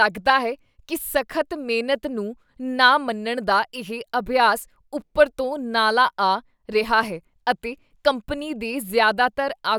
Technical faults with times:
none

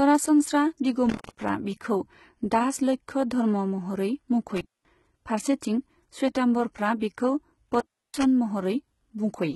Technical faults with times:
0.00-9.56 HE-AAC compression
0.78 pre-echo
1.06-1.49 intermittent contact
4.56-4.87 intermittent contact
6.99-7.02 pre-echo
7.69-8.24 intermittent contact

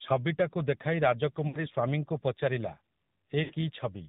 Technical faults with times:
0.00-4.08 AMR narrowband mobile codec
1.48-1.57 lost AMR speech frames
3.44-3.54 lost AMR speech frames

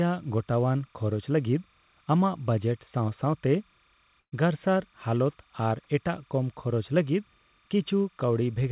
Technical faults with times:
0.00-8.71 timecode bleed
4.20-4.34 burst of packet loss

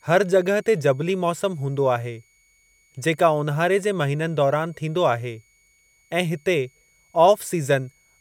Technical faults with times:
0.00-8.21 switching supply whistle

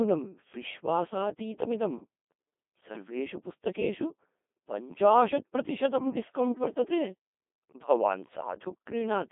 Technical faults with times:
0.00-9.31 Codec 2 vocoder

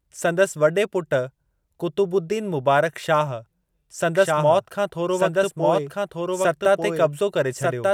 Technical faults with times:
4.15-7.93 doubled audio track

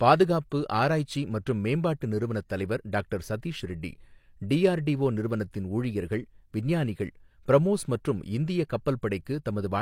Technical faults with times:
9.25 pre-echo

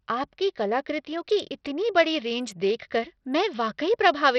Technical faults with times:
0.00-4.38 Bluetooth SBC compression

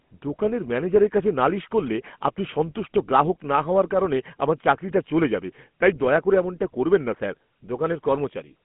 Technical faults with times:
0.00-8.65 GSM full-rate codec

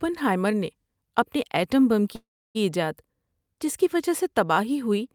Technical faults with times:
2.15-2.57 call audio freeze

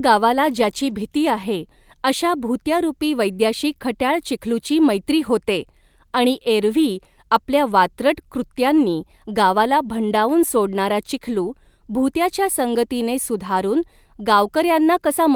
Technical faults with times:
none

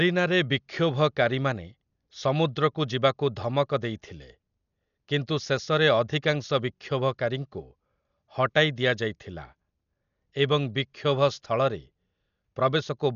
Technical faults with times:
0.00-13.15 Dolby Digital compression

